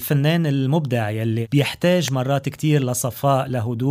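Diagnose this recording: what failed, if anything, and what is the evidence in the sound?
An electrical switching spike appears at 2.08 s: a single sharp snap, lasting only about a millisecond and peaking around -5 dBFS, sitting on top of the sound rather than replacing it. The failure is in the analogue wiring stage. Such a brief, isolated transient is most likely a nearby switch, relay, motor or static discharge arcing, with the cabling picking up that burst of interference before conversion.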